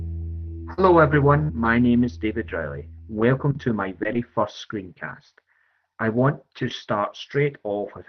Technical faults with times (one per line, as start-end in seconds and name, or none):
0.73-0.79 short concealed packet loss
0.77-0.79 lost packet rebuilt from error correction
1.25-1.61 lost packet rebuilt from error correction
1.43-1.51 burst of packet loss